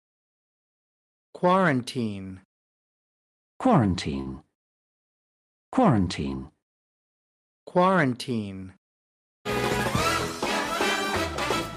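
A short stall from a late packet occurs at 4.21 to 4.29 s. The packet arrived late, the jitter buffer ran dry, and the receiver stretched the preceding sound by 45 ms before resuming where it left off. Nothing is lost, but that moment hangs slightly too long, with a faint buzz or dip.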